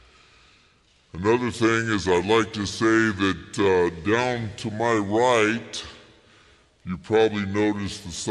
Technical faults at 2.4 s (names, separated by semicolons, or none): wrong sample rate